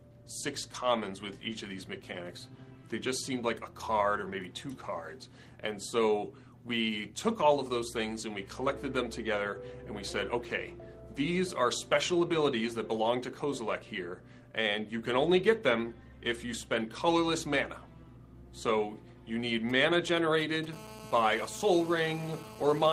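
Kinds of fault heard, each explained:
GSM signalling bursts: A nearby 2G phone handshaking with the network, and the audio circuit rectifying those short radio pulses. From 19.7 to 20.66 s you get a galloping dit-dit-dit of brief 217 Hz buzzes, roughly 15 dB below the audio.
GSM phone buzz: A nearby 2G phone, now in a call, transmitting bursts steadily 217 times a second, which the circuit rectifies into audio. From 20.73 s to the end there's a hard, raspy 217 Hz buzz full of harmonics, about 17 dB under the signal.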